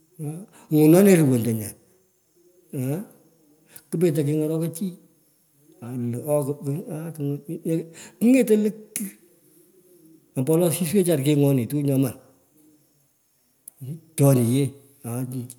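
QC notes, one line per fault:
No faults found in the speech on review.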